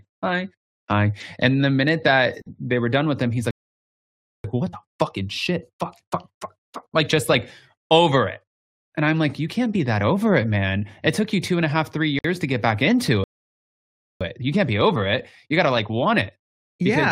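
This speech clip has two gaps at a join of encoded pieces, at 2.42 s and 12.19 s. They are brief silences of about 45 ms and 55 ms with smeared edges. Separately encoded pieces were joined untrimmed, leaving encoder delay and padding in. Playback stalls twice. After "done with him he's" the sound cuts out from 3.51 to 4.44 s. After "to get back into" it drops again from 13.24 to 14.21 s. Each silence lasts nearly a second and likely comes from the player starving for data. Time-compressed catch-up follows each stall, from 4.44 to 7.44 s and from 14.21 s to the end. Speech runs 1.15 times fast at normal pitch. The player is trimming its backlog by cross-fading small pieces out.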